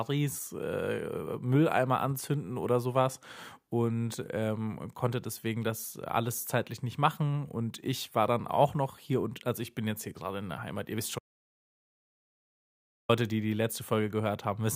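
At 11.19 s, after "ihr wisst", an audio dropout to silence leaves 1.9 s of silence. Unlike a pause, no room tone remains. The cause is likely lost input, and the speech resumes at "die die".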